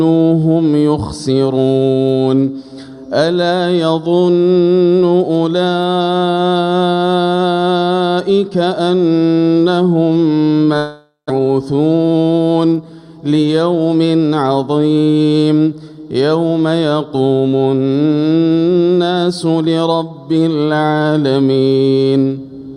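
From 10.77 to 11.32 s the sound smears into a fading buzz, then about 140 ms of near-silence, and resumes with roughly 400 ms missing: a long network dropout, likely. A spectrogram shows smeared, decaying harmonics, then a blank gap.

From 11.39 to 12.23 s, a jitter buffer speed-up trims short pitch-period pieces to shed about a tenth of a second of excess delay. The audio plays 111% fast at unchanged pitch and sounds hurried. The waveform shows cycles of unchanged length, while spectrogram bands stay level.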